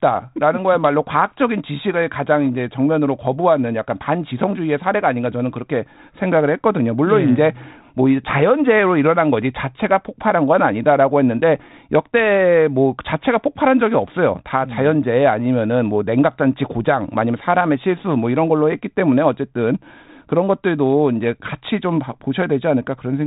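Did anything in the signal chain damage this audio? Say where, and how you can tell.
No, nothing in the chain has damaged this speech; it's just the usual G.726 path at 32 kbit/s doing its normal job, with the band stopping around 3.8 kHz as that telephone codec intends.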